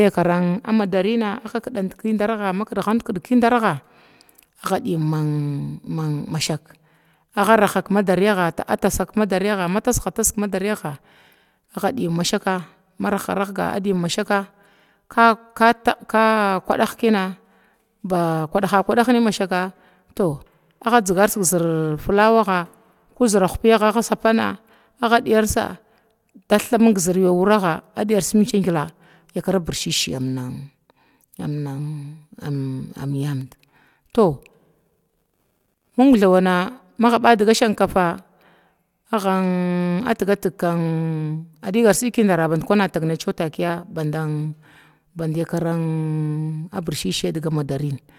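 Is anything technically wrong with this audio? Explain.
No, nothing is technically wrong with this audio.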